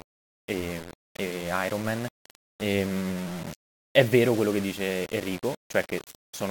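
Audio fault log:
Throughout: low bit depth without dither. The speech carries a coarse, grainy distortion that tracks the level of the voice, roughening quiet passages most and making the softest tails sputter or cut to silence instead of fading smoothly. The likely cause is requantisation to around 6 bits by plain rounding with no dither, so the error stays locked to the waveform as harmonic grit rather than a steady hiss, sitting only about 15 dB below the signal.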